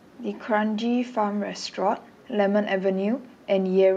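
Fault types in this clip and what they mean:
Nothing stood out on listening to the speech here.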